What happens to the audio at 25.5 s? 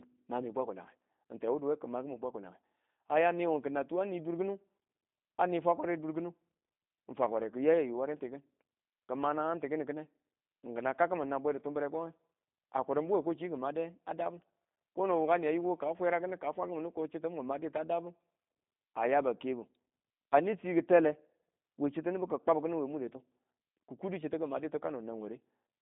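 At 25.5 s, as throughout the clip, the speech carries G.729 codec damage. Each 10 ms frame is rebuilt from a filter, a pitch predictor and sparse pulses, which fits an 8 kbit/s stream and leaves a rough, synthetic edge. A spectrogram shows nothing above 3.8 kHz.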